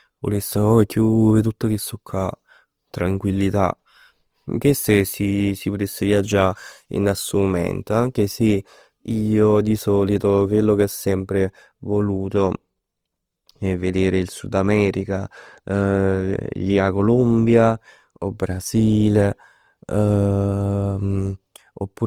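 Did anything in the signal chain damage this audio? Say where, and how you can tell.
Yes, at the codec stage, and it runs the whole clip. The speech sounds grainy and rough rather than swirly, yet content still reaches about 20.2 kHz. That points to likely Opus compression in its CELT music mode, filling starved bands with folded or noisy energy, consistent with roughly 24 kbps.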